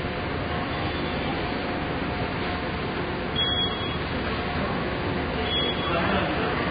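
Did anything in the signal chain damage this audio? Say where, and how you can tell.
Yes, at the codec stage: heavy Vorbis compression, likely at a very low bitrate of around 16 kbps, runs through the whole clip. Nothing remains above 4.9 kHz, and the coarsely quantised residue turns fine detail into hiss, so these sounds come across grainy and roughened, with smeared attacks.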